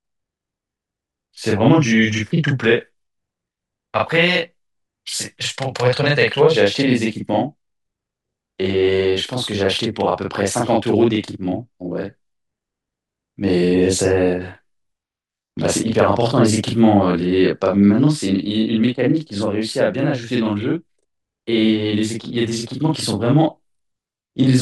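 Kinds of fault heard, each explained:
Channel delay (doubling): One channel of this speech arrives 40 ms behind the other, and when the two are summed to mono the late copy stands apart. It sounds like a second voice trailing closely, a doubled or slapback effect at equal level. This persists throughout the clip.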